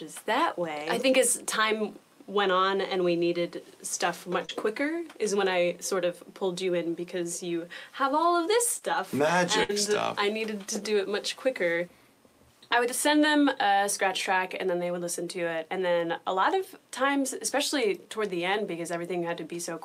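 Short concealed packet loss occurs twice, at 4.45 to 4.51 s and 8.79 to 8.83 s. Packets arrived too late for the decoder, so the receiver extended the preceding sound for about 33 ms and 26 ms, then blended back in, leaving a brief smear with 40 ms and 20 ms of the original missing. A burst of packet loss follows at 9.63 to 9.71 s. Several consecutive packets failed to arrive in time, and the receiver stretched the last sound for 56 ms while fading it down. The result is a held, decaying fill, after which the audio resumes with 60 ms skipped.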